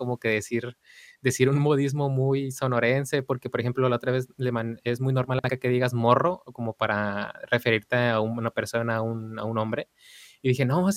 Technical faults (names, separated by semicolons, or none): frames out of order